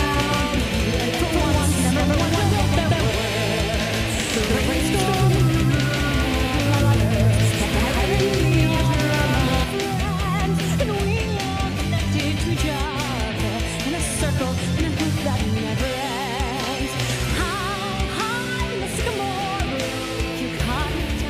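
From the very start until 9.64 s, every sound arrives twice: a second, full-band copy trails the first by roughly 150 ms at about the same level, with no decay or room colour, and it drops out abruptly at 9.64 s. This is a doubled audio track. The likely cause is the same signal reaching the mix a second time through a slower path, or an edit leaving two copies out of step.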